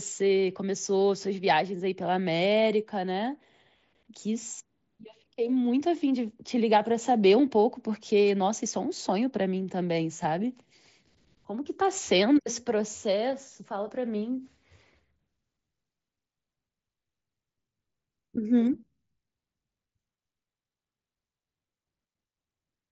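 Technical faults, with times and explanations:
10.23 s, concealed Bluetooth headset packet loss. About 7.5 ms of audio never arrived over the headset link, which fits a single lost frame. The receiver filled the gap with a closely matching stretch of the preceding waveform, so the patch is nearly inaudible.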